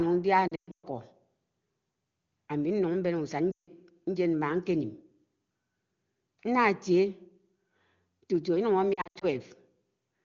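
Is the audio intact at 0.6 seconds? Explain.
No. At 0.6 seconds the sound is inside a burst of lost AMR speech frames running from about 0.48 to 0.85 s, with roughly 280 ms of audio lost across 360 ms and the longest gap 120 ms. Frames failing their checks forced the wideband decoder to repeat its last good pitch and vocal tract parameters at dropping gain. The result is sound dropping to near silence within two frames, then a weak, rough recovery once valid frames return.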